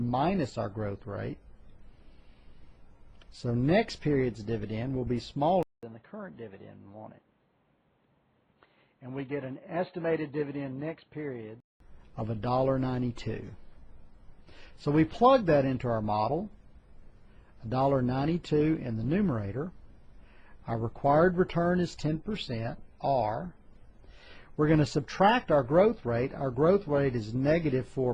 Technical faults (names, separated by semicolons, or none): input switched to a poorer device